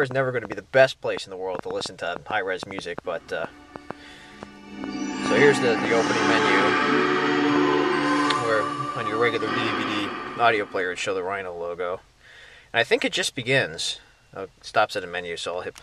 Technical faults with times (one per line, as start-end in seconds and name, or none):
0.03-7.57 train of clicks